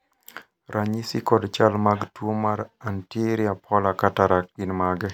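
No technical faults can be heard anywhere in this speech recording. The audio runs without dropouts, clicks, distortion or timing glitches.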